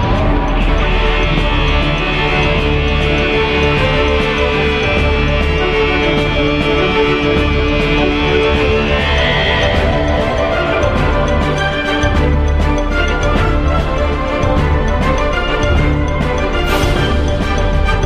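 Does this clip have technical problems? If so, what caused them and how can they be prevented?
No, the signal comes through intact with steady level and continuity, and no technical problems can be heard that would need a cause or a fix.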